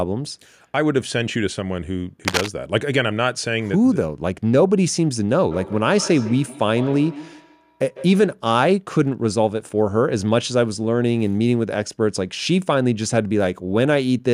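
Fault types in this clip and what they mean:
Cable scratch noise: From 2.25 to 2.48 s, a brief burst of dense, ragged scratching sits over the speech, only a few decibels below it, so it is clearly audible for about a quarter of a second. The uneven, crackling texture points to a cable, connector or control being moved, which likely caused it. A worn contact whose resistance jumps around as it shifts lets irregular noise bursts into the signal path.
Feedback echo between two devices: Between 5.51 and 8.33 s, the speech comes back at a steady interval of roughly 150 ms. The repeats reach about 15 dB below the speech and grow thinner and more ringing each time round. This happens when two devices on the same call share a room. One plays what the other's microphone sent, and that microphone picks it up again. Each device's echo canceller removes only its own playback, so the loop keeps circulating.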